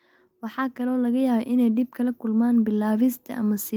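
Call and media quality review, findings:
Automatic gain rising, 0.54 s to 3.74 s. Level swells steadily, about 8 dB overall. Speech and background noise rise together. Component: AGC stage in the capture path. Input judged too quiet, so gain is raised gradually across roughly three seconds. No single step, just a slow climb.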